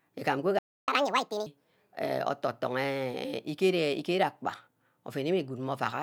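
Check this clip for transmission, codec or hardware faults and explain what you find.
Two related playback faults occur early in this speech clip: a stall and then a sped-up catch-up.

Playback stall, 0.59 to 0.88 s: the speech cuts out mid-flow and the output goes silent for about 0.29 s before resuming. The likely cause is the player running short of buffered data, or its audio thread being held up, so it had nothing to send to the output until it recovered. The gap is long enough to hear as a clear hitch.

Catch-up at higher speed, 0.88 to 1.46 s: right after the gap, the player works through its backlog by resampling the audio 1.5 times faster to win back the lost time. Because speed and pitch are tied in this method, the speech runs noticeably quick and its pitch rises by about seven semitones, giving it a squeaky, chipmunk-like quality. At 1.46 s both drop back to normal.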